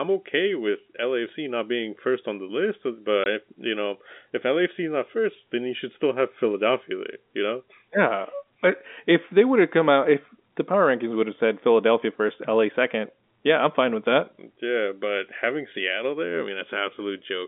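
At 3.24 s the speech drops out completely until 3.26 s, a single 20 ms hole caused by packet loss filled with silence. One packet never arrived, and the receiver inserted silence in its place instead of concealing the gap, so the waveform cuts abruptly to a flat line and restarts with hard edges. On a spectrogram this appears as a thin vertical blank strip across the telephone band of roughly 200 Hz to 3.6 kHz carried by the G.711 line.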